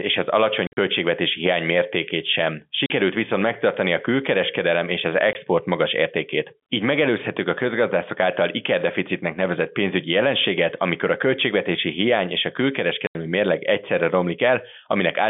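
Packet loss filled with silence leaves hard-edged holes at 0.67–0.77 s (broken up, longest run 50 ms), 2.86–2.9 s after "hiány mértékét sem", 5.33–5.35 s after "a külkereskedelem és az", and 13.07–13.15 s before "mérleg egyszerre". The gap lengths step in multiples consistent with 10 ms packets.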